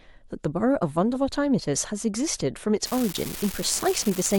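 From 2.85 s to the end, a steady crackling fizz sits over the speech and carries on through the pauses as well. The fault is an unreliable data bit: one line carrying a single bit of each sample is marginal, so that bit flips in a random share of samples. Every flip adds a spike of identical size, about -17 dBFS, and the scattered spikes build up into the constant grainy texture.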